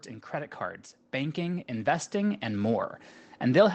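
From 0.05 s to 2.93 s the automatic gain rises: the gain control judged the input too quiet and raised it by about 10 dB, so speech and background noise swell together. The waveform envelope widens steadily, and on the spectrogram the whole band, capped near 8 kHz by the call codec, brightens.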